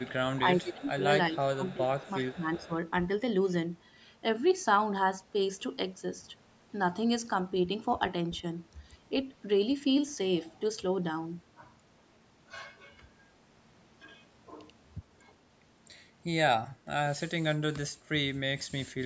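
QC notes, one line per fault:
0.0–0.14, 0.34–0.38, 0.85–0.89, 1.63–1.74, 1.98–2.11, 2.54–2.74 s, echo leak: faint copy trailing 377 ms behind, roughly 25–30 dB down, likely residual loudspeaker echo; shows as weak, shifted ghost harmonics.
0.42–1.01, 1.3–2.72 s, speech suppressed in double talk: talker dips up to roughly 20 dB, likely echo canceller ducking during overlap; waveform shows notched envelope, spectrogram thins.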